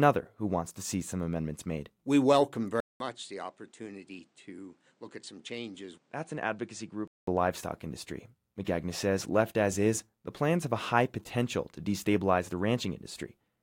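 Speech. From 2.80 s to 7.28 s it goes dull and drops around 10 dB, with nothing above 9.8 kHz, a 200 ms gap at the switch and a new noise roughly 35 dB down. That's likely the input switched to a poorer device, and it sets in just before "livestock industry".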